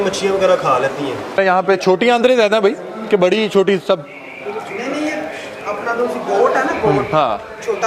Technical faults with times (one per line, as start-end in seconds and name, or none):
none